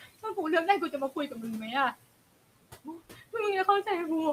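A speech recording with noise suppressor artifacts running its full length: the room noise, sitting about 18 dB below the speech, is pulled down by about 18 dB whenever the talker pauses and then swells back up under each phrase. This comes from the suppressor deciding band by band, frame by frame, what counts as steady noise. That pumping texture is what separates it from plain background noise, which would stay level and smooth. There are also two stretches of speech cut by the noise suppressor, where the processor mistook parts of the speech itself for noise. The first runs from 0.00 to 0.37 s, with roughly 150 ms affected and the deepest drop about 14 dB. The second runs from 2.49 to 3.23 s, with around 300 ms affected and drops reaching about 18 dB. In both, the affected speech sounds swallowed or faint rather than silenced. The cuts sit on the quiet parts of the speech, which distinguishes them from a network dropout or a gain fault that would hit loud and soft sound alike.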